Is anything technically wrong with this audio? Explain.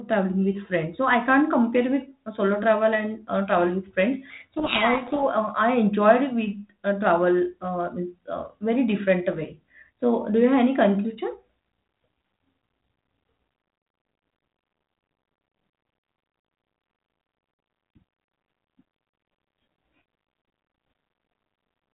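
Yes. From 4.30 to 5.27 s there is a codec payload misread. The sending and receiving ends of this G.726 link disagreed on the bit order of the ADPCM code words. The decoder kept accepting the frames but rebuilt each sample from scrambled difference values, and its adaptive predictor was driven off course by them. For that second the speech is buried in harsh, grinding distortion. It clears once both sides agree on the packing again. The G.726 coding itself, which fits 32 kbit/s, limits the audio to below 4 kHz and leaves only light codec noise.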